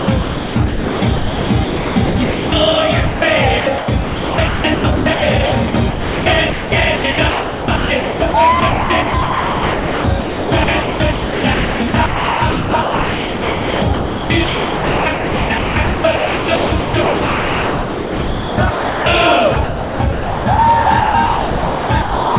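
From 0.00 to 2.52 s the sound is chopped by the voice detector, likely because the sender's detector kept toggling transmission: about 1.8 s of that stretch is replaced by smooth synthetic noise, so quiet edges vanish. On a spectrogram, ragged sound alternates with flat, featureless noise bands, all capped at 4 kHz, which fits a narrowband call codec such as G.711 at 64 kbps.

From 3.06 to 3.22 s, 160 ms of sound is dropped by the voice detector, likely after it mistook that quiet passage for background and stopped sending. Steady comfort noise fills the gap before the sound returns. The waveform shows a short, even, low-level block, and the spectrogram a uniform noise patch with no structure.

The same chopping then returns across 3.60–8.34 s (about 2.56 s replaced), 8.60–19.06 s (about 8.2 s), 19.54–20.58 s (0.74 s) and 20.84–22.36 s (1.14 s). It sounds choppy and gated throughout, and the envelope repeatedly snaps between detail and flat noise.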